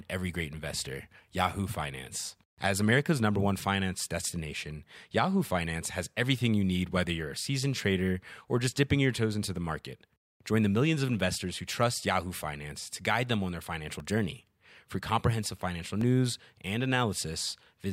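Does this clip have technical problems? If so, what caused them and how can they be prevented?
Yes: periodic USB or driver dropouts, ticks every 2.0 s from 2.03 to 16.02 s, each about a millisecond of audio replaced by silence, metronomically spaced unlike random clicks. Prevent it by disabling the background task polling the bus or driver, or by moving the interface to its own USB controller.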